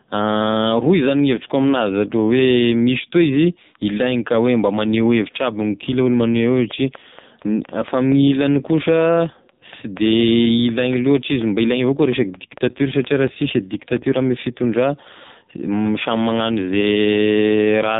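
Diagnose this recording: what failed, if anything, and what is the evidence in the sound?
The whole recording has gone through the AMR narrowband mobile codec, so this is a codec-stage problem. Nothing gets through above 3.8 kHz, and the speech sounds heavily buzzy and synthetic, which fits AMR-NB running at its low 5.9 kbps mode with very little left for the vocal-tract model.

Separately, there's a train of clicks from 6.71 to 14.21 s: around thirty similar pops at a steady 4.27 per second, peaking about 5 dB above the speech. The likely cause is electrical interference getting into the analogue wiring.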